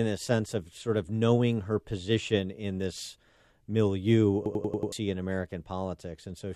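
From 4.46 to 4.92 s the speech breaks into a rapid machine-gun stutter, one 93 ms fragment repeating five times at about 10.8 Hz. This is a system hang loop, with the hardware replaying a stalled ring buffer that fits 4096 samples, and about half a second of audio is lost.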